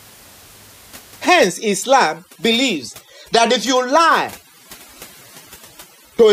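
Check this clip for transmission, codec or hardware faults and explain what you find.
One fault is present: overdone noise removal from 1.40 s to the end. Before it, room noise sits about 25 dB below the speech.

Overdone noise removal: an over-aggressive suppressor cuts frequency bands near its noise estimate, taking quiet speech with them. The background drops to twinkling near-silence.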